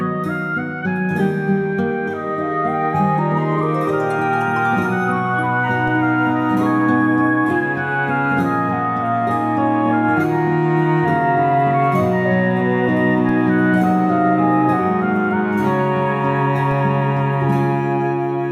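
At 5.88, 13.29 and 16.71 s, DC steps of about -24 dBFS shift the waveform's zero line, then decay through a 20 Hz high-pass. Each gives a low thump, seen as a brief full-height spectrogram stripe.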